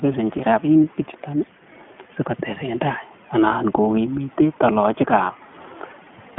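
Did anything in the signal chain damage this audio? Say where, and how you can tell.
Yes. The speech sounds boxed-in from start to finish, with a slightly grainy, synthetic edge and nothing audible above about 3.7 kHz. That points to the codec stage, specifically iLBC. It codes each 20 ms frame's excitation independently, which gives the rough texture. The telephone-style band of roughly 150 Hz to 3.4 kHz removes the sibilant top end. The damage is plainly audible, which fits iLBC's 15.2 kbps mode.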